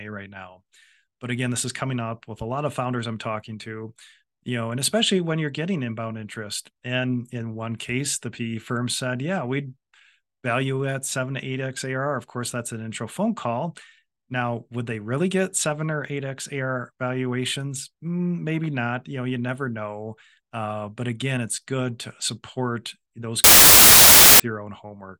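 From 23.44 s to 24.40 s the speech is buried under a burst of loud, harsh broadband noise lasting just under a second. This is samples built from the wrong bytes: for that stretch each sample was assembled from misaligned or byte-swapped data, so the rapidly fluctuating low-order bits landed in the most significant position and turned ordinary waveform detail into loud noise.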